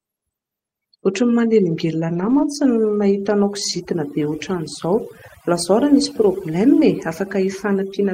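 Overdone noise removal runs through the whole speech clip. The noise reducer was set too hard. Frequency bands close to its noise estimate are pushed far down or cut out, and softer parts of the voice are cut with them. Between phrases the background drops and breaks up into small twinkling specks.

From 2.09 to 2.43 s, a lost packet is rebuilt from error correction. The decoder fills the gap with the low-bitrate backup copies carried in the following packets, so nothing drops out. About 180 ms is rebuilt, which fits nine 20 ms packets. That stretch sounds rougher and noisier. The same repair happens from 3.69 to 3.79 s, about 60 ms, which suggests three packets. A single packet is patched at 6.03 s as a brief grainy blip.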